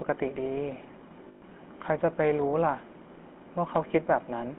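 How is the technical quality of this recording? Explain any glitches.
The recording is limited by plainly audible narrowband codec damage throughout, with two short dropout glitches.

GSM full-rate codec: The whole clip is confined to roughly 200 Hz to 3.4 kHz and carries a plainly audible buzzy, gravelly roughness. The speech is rebuilt from a vocal-tract model excited by a sparse, regularly spaced pulse train, which fits the 13 kbps full-rate coder.

Lost GSM frames: From 1.28 to 1.43 s, about 140 ms of speech is replaced by a held, metallic ringing tone. The decoder repeats the last good frame's parameters, which points to a run of about seven lost frames. A shorter blip of the same ring occurs from 3.88 to 3.91 s, consistent with a single 20 ms frame being concealed.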